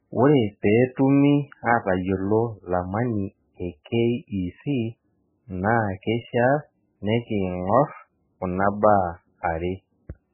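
Speech runs through heavy MP3 compression from start to finish. Nothing is audible above 3 kHz, so the treble is cut off flat and sibilants lose their edge. The remaining band sounds watery and swirly, because weak frequency lines drop in and out from frame to frame when the encoder runs short of bits. Damage this severe fits a very low bitrate, around 8 kbps, which is the likely cause.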